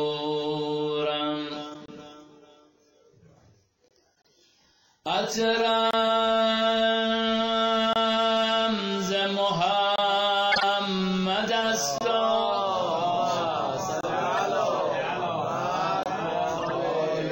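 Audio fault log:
throughout, MP3 compression: watery, swirly treble and smeared attacks. The likely cause is low-rate MP3 encoding, which fits about 64 kbps: the encoder cuts the treble and drops weak frequency components from frame to frame.
1.70–1.76 s, 10.52–10.63 s, 14.37–14.39 s, 16.58–16.71 s, corrupt frame decoded: short chirps and noise bursts. Damaged compressed frames, one to several each time, were played anyway and put energy at the wrong frequencies.
1.86, 3.88, 5.91, 7.93, 9.96, 11.98, 14.01, 16.03 s, gap between chunks: 25 ms silences every 2 s. Each join between 2-second chunks leaves an empty space, so the sound is interrupted but not lost.
4.19–4.29 s, corrupt frame muted: an abrupt 94 ms hole. The decoder rejected a short run of damaged frames, about five, and silence replaced them while timing was kept.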